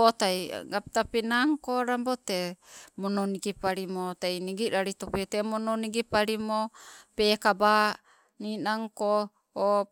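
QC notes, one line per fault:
No faults found on listening; nothing to log for this speech clip.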